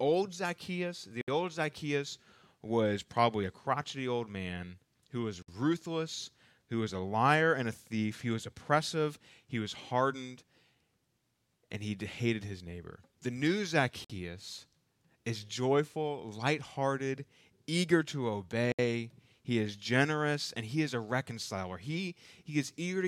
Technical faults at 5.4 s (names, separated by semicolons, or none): gap at a join of encoded pieces